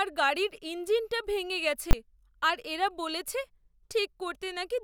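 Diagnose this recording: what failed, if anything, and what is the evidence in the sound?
A single sharp bang at 1.91 to 1.93 s, right after "গাড়ির ইঞ্জিনটা ভেঙে গেছে" and before "আর এরা বলেছে", marks invalid numbers at full scale. In sample-format conversion, a calculation yielded infinite or invalid values that clamped to the largest positive or negative value, pinning a 20 ms block flat at that extreme.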